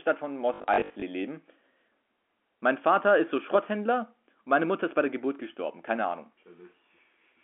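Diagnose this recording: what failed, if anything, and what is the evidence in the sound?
Network stage: packet loss with the last packet repeated, from 0.54 to 1.02 s. Of that 480 ms, 280 ms is replayed in runs up to 60 ms, and a 50 Hz buzz fits 20 ms packets. The waveform shows identical repeated blocks, and the spectrogram shows 50 Hz harmonic stripes.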